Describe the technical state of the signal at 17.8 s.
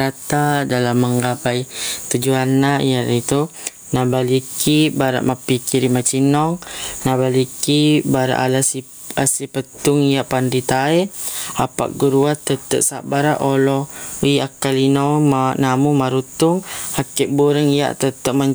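Gain pumping is present at 17.8 s, as it is throughout the speech. The input gain is likely set far too high, so a fast limiter clamps down on each loud sound, swinging the gain by roughly 15 dB and leaving the sound squashed.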